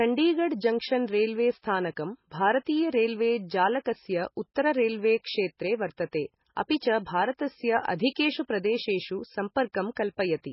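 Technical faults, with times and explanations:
Throughout, MP3 compression: nothing remains above 5.6 kHz, and the speech swirls and sounds watery as weak frequency lines flicker between frames. The likely cause is an encoder starved of bits, which fits about 16 kbps. A plain low-pass filter would dull treble without this swirl.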